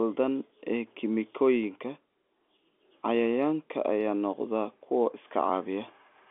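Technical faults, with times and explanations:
No technical faults can be heard in this speech.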